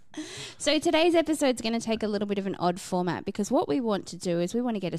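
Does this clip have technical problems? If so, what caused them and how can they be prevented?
No, nothing technical goes wrong in this speech recording, so there's nothing here that needs preventing.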